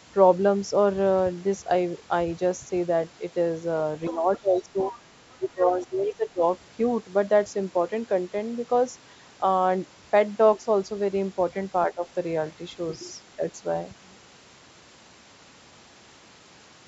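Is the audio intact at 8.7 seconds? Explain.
Yes, the speech at 8.7 seconds is intact, with no dropout, click, distortion or other fault there.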